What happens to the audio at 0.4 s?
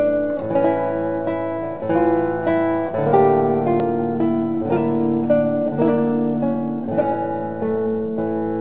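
Nothing goes wrong at 0.4 s: the audio is intact there, carried through the WebRTC call path, which passes nothing above 4 kHz.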